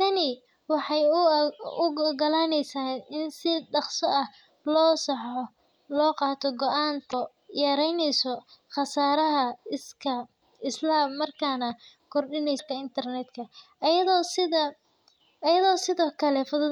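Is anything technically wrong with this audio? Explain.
Yes. The speech has damaged data in a compressed stream in two places: from 7.10 to 7.14 s, just before "yaraynaysa khasaaraha", and from 12.55 to 12.60 s. Each lasts about 40 ms. In both spots part of the compressed data is corrupt, so the decoder misreads or discards those frames, loses sync and hunts for the next valid frame header. The result is a short chirp, squawk, click or hole that cuts briefly across the speech.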